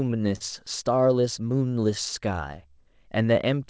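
Around 0.36 to 0.42 s there's a short stall from a late packet. The jitter buffer ran dry, so the sound gets held for about 43 ms with a faint buzz or dip, then picks up right where it left off.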